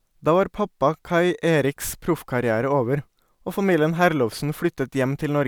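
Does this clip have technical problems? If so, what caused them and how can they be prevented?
No, the speech recording shows no technical faults, so there is no cause to trace and nothing to prevent.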